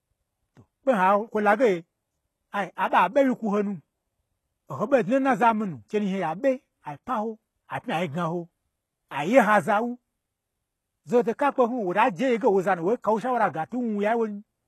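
Speech whose s sounds come out gritty and lispy throughout, with the brightness above the midrange sounding synthetic and nothing at all above 12.3 kHz. This is likely HE-AAC compression at a very low bitrate, around 16 kbps, rebuilding the treble from copied lower bands.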